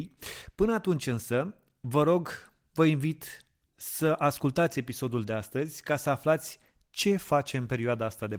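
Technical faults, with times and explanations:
No technical faults detected.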